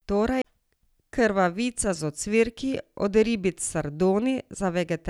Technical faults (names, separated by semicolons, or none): CD skip